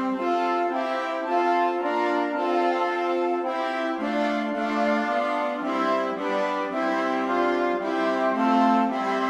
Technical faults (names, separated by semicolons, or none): none